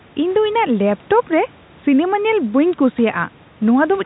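No technical faults can be heard in the speech, which carries the narrow band of G.711 mu-law telephone coding with nothing above 3.9 kHz, after call microphone processing whose low-cut is normal, and with room noise sitting about 31 dB below the speech.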